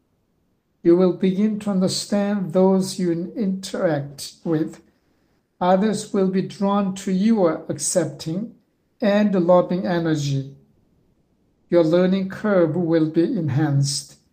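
At 8.71 s, for 0.28 s, and at 10.73 s, for 0.96 s, comfort noise in place of the background. The real background drops out for a steady, featureless hiss. It sits about 1 dB quieter, then about 2 dB louder. Discontinuous transmission is the likely cause.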